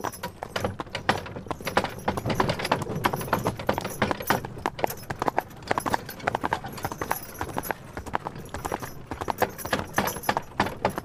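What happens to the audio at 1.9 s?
Nothing goes wrong at 1.9 s; the audio plays through that moment intact, with no dropout, click or distortion.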